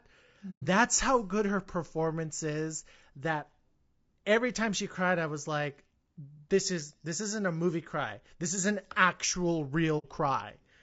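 All the way through, the speech has a rough, grainy edge, with noise filling in between the harmonics and a top end that sounds thin and a bit synthetic. That's plainly audible codec damage, likely from low-delay AAC compression like AAC-ELD at a low bitrate, consistent with around 32 kbps.

At 0.50 s there's AAC frame loss with muting: the sound fades out, leaves a soft-edged hole of about 120 ms until 0.63 s, and fades back in. The same thing happens at 9.98 s, with a shorter gap of about 60 ms.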